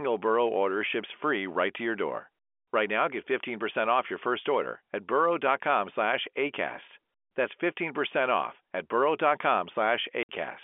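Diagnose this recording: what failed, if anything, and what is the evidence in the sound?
A 60 ms hole of silence drops into the speech from 10.23 to 10.29 s, with hard edges at both ends. This is packet loss filled with silence at the network stage. The receiver lacked audio for that span and played silence, which fits two lost 30 ms packets over the G.711 telephone line band of 250 Hz to 3.4 kHz.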